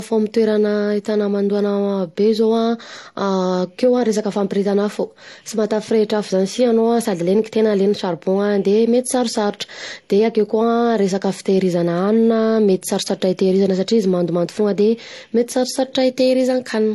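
From start to finish, the speech has nothing above 12 kHz and carries two kinds of coding damage at once: the artefacts of MP3, overlaid with those of HE-AAC. This points to transcoding between lossy codecs, likely a low-bitrate MP3 of around 47 kbit/s re-encoded to HE-AAC at about 40 kbit/s, with the second encoder spending bits on the first one's artefacts and adding its own.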